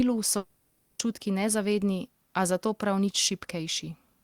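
This is a speech clip with a long network dropout from 0.37 s to 1.01 s. The speech stops and the last sound is stretched into a fading buzz or hiss. That fill lasts about 0.62 s and covers the whole gap, so there is no pure silence. About 0.62 s of the original audio is missing. Speech resumes at 1.01 s without the lost part. The likely cause is a run of packets that never reached the receiver, which then concealed the gap.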